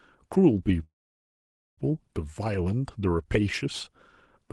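Call audio freeze, 0.83 to 1.79 s: the speech stalls into near silence, likely from delayed packets emptying the jitter buffer, then resumes with nothing lost.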